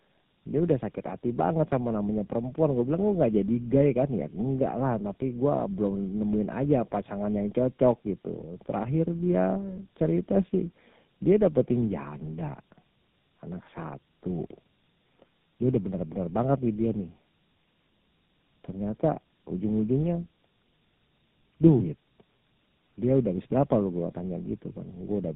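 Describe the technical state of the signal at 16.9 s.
At 16.9 s the speech sounds rough, muffled and warbly, with nothing above 3.8 kHz. This is tandem speech coding, present throughout: AMR-NB 7.95 kbit/s, then G.711 A-law, then GSM full rate 13 kbit/s, each re-coding the previous codec's degraded output.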